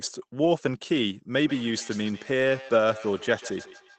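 From 0.41 to 0.47 s there is a lost packet rebuilt from error correction, which fits two separate 20 ms packets going missing. The decoder filled the gap with the low-bitrate copies carried in the following packets, so nothing drops out. Instead the sound turns briefly rough and grainy. On a spectrogram that stretch shows smeared, noisier harmonics with less fine detail. The waveform stays continuous, with no gap or click.

From 1.4 s to the end of the clip, a feedback echo between two devices appears. A second device in the same room plays the call back, and the first microphone picks it up again. Because each device's echo canceller only removes its own playback, the sound returns about every 150 ms, thinner and ringier each pass, peaking at about 18 dB below the speech. A spectrogram shows faint, evenly spaced copies trailing each burst. The waveform shows small repeating tails.

At 2.61 to 2.63 s, the lost packet rebuilt from error correction recurs for a single 20 ms packet. 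It gives a brief grainy patch with no gap. It is hard to spot in the waveform, but shows as a thin, blurred vertical slice on a spectrogram. Throughout, the Opus call path limits the content to 8 kHz, so the spectrogram shows a flat ceiling at that height.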